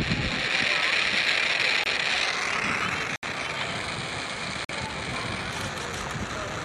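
Damaged compressed frames were rejected by the decoder and replaced with silence, a corrupt frame muted fault, at 1.84 s, 3.16 s and 4.65 s. Each hole cuts in abruptly, lasting 42 ms, 82 ms and 68 ms. The longer two point to several consecutive frames lost, and timing stays intact.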